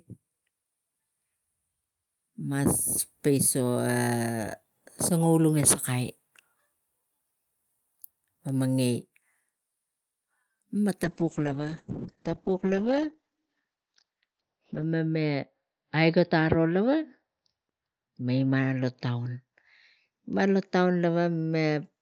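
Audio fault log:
11.04–22.01 s call bitrate drop: speech turns coarse and watery and loses everything above 6 kHz (earlier up to 20 kHz), which fits the encoder falling from about 40 to 8 kbps. Unlike a plain low-pass filter, the texture itself degrades, worst for 3.81 s.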